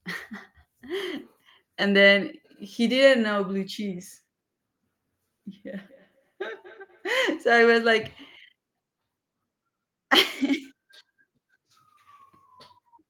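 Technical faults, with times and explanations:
5.70 to 7.18 s, feedback echo between two devices: the speech comes back about every fifth of a second, faint at about -29 dB, because a second device in the room replays it into the microphone.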